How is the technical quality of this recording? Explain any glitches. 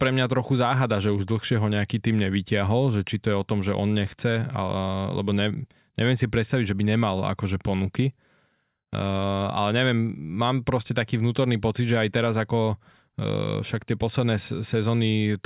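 Listening closely, nothing in the recording stood out as a technical problem worth flagging.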